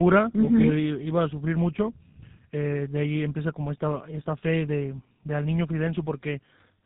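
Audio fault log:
Throughout: tandem speech coding. The speech was squeezed through a low-rate codec at about 8 kbit/s, then carried at 64 kbit/s, and then squeezed again by a GSM full rate coder at 13 kbit/s. The second lossy coder had to rebuild speech that had already been damaged by the first, so the errors pile up. The result is rough, muffled and warbly speech. On a spectrogram nothing appears above 3.8 kHz, and the harmonics look smeared and unsteady.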